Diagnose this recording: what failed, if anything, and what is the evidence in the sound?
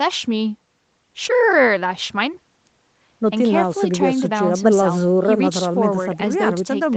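Nothing failed here: the speech comes across as an ordinary call, with the call processing and codec keeping everything below about 8 kHz as they normally would, and nothing in the sound points to any stage going wrong.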